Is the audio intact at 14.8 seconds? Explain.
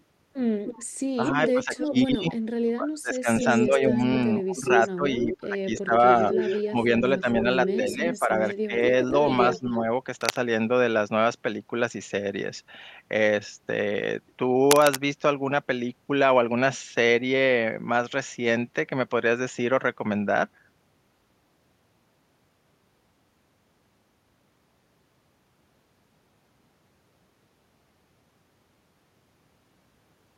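No, cable scratch noise runs from 14.71 to 14.96 s. A worn cable or connector being moved likely caused it, its contact resistance flickering rapidly and injecting dense, uneven noise bursts, heard as a scratchy rustle sitting only slightly below the speech.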